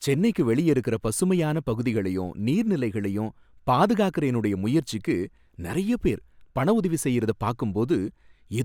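There are no technical faults in this speech to describe.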